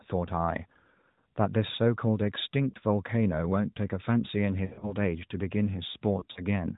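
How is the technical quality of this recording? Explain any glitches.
The recording is marred by four dropouts from lost AMR speech frames, at 1.12 to 1.17 s, 2.70 to 2.76 s, 4.66 to 4.95 s and 6.20 to 6.41 s. Radio errors corrupted frames, so the decoder filled the gaps by repeating the last good pitch and vocal tract settings at falling gain. The first two losses of about 40 ms give a brief warble. The later ones, 120 ms and 80 ms of loss scattered across stretches of up to 160 ms, smear and fade the speech before it returns rough. The speech itself carries the light buzz and 4 kHz ceiling of narrowband AMR, which points to its 12.2 kbps mode.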